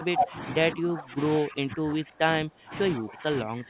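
An echo canceller that likely could not tell the near talker from loudspeaker echo during double talk keeps turning this speech down, producing speech suppressed in double talk. The level sinks from 0 to 0.38 s, 0.75 to 1.19 s, 1.39 to 2.73 s and 2.94 s to the end, by about 15 dB and about 20 dB in the long middle stretch, so the speech dips and fades in pieces over the narrowband call path, whose cut-off near 4 kHz points to G.711 mu-law at 64 kbps.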